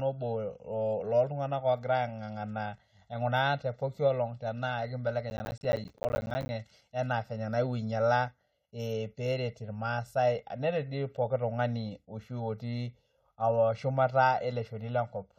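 From the start the speech sounds hollow and phasey, with a thin, fixed colouring that never shifts. This is channel delay (comb filtering). One channel trails the other by about 1.5 ms, so summing them to mono cancels evenly spaced frequencies, with the first notch falling around 300 Hz.

Between 5.3 and 6.49 s a burst of gritty crackle tears across the speech, then stops. That is processor overload crackle. Dozens of short audio buffers, each roughly 10 ms long, missed their deadlines again and again over that stretch, and each miss dropped in a hard-edged gap of silence.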